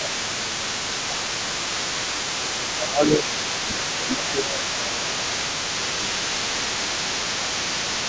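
From the very start and right through to the end, you can hear a second voice underneath, about 10 dB below the main talker. That's the other side's voice leaking through, likely because the echo canceller left some of the loudspeaker playback in the microphone signal.

On top of that, the main speech keeps getting pushed down, which is speech suppressed in double talk. It happens from 0.0 to 2.18 s, 2.36 to 3.25 s, 3.64 to 6.65 s and 6.82 to 8.05 s. The canceller most likely couldn't tell the talker from the echo while both were active and ducked everything. The dips reach around 10 dB, and the last one is shallower at roughly 5 dB. The band tops out at 8 kHz, as expected from call microphone processing.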